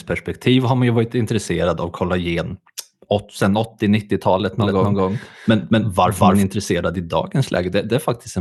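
From 4.60 s to 6.44 s the speech is heard twice: a second, equally loud copy trails the first by about a fifth of a second, giving a stuttering, echo-like overlap with no reverberant tail. It cuts in and out abruptly, ending just before "intresserad i". This is a doubled audio track, most likely the same signal captured again through a slower path, or two unaligned copies left in an edit, summed with the original.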